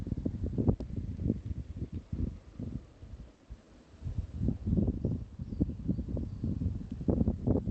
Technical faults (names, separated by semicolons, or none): short stall from a late packet; short concealed packet loss